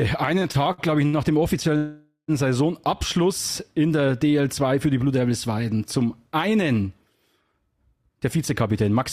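From 0.39 to 1.15 s, repeated stalls (stutter): the jitter buffer ran dry five times. Each gap, the longest 68 ms, was filled by continuing the last sound, so the audio drags.

At 1.77 to 2.30 s, a call audio freeze: the sound hangs as a fading buzz for 513 ms, ending in 130 ms of silence, then resumes. Delayed packets are the likely cause.

From 7.96 to 8.99 s, jitter buffer speed-up: about a tenth of a second of pitch periods was cut out, so the audio runs at 109% speed with unchanged pitch and sounds hurried.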